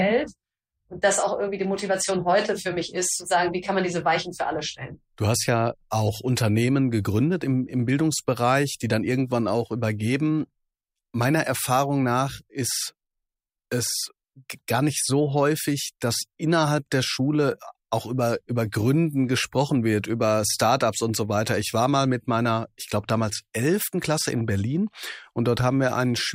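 No technical faults are audible anywhere in the recording.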